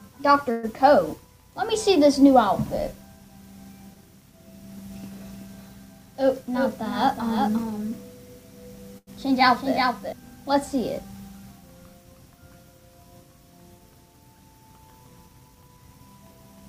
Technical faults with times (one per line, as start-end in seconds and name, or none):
0.51-0.65 call audio freeze
5.03-10.13 doubled audio track
5.99-7.71 jitter buffer speed-up
8.98-9.09 short stall from a late packet
15.26-15.78 jitter buffer speed-up